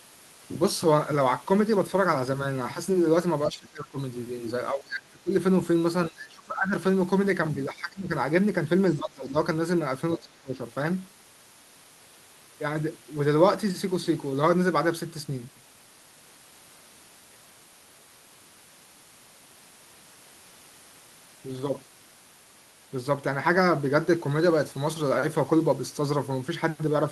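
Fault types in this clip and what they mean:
Speech suppressed in double talk, at 3.48–3.98, 4.72–5.32, 6.09–6.74, 7.70–8.11, 8.98–9.36 and 10.17–10.60 s: the speech repeatedly sinks by about 20 dB, reaching about 25 dB at 10.17 s, for roughly half a second each time. The likely cause is an echo canceller that, with both ends talking at once, could not tell the near talker from loudspeaker echo and pulled the whole signal down to be safe.
Other side's voice leaking through, at 8.94–8.99 s: a brief scrap of a second voice, about 35 dB below the speech, slips in just before the dip at 8.98 s. This is likely residual loudspeaker sound that the echo canceller failed to remove from the microphone signal, leaving a faint fragment of the far end in the recording.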